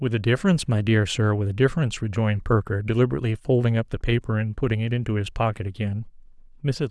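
Listening to the speech recording, nothing stood out as a technical problem at any point.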